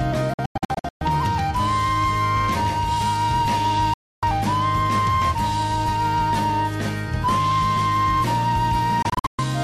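Digital broadcast dropouts at 0.34 to 1.02 s, 3.94 to 4.23 s and 9.02 to 9.44 s: the receiver lost valid frames and muted, leaving abrupt silent holes where that audio is gone.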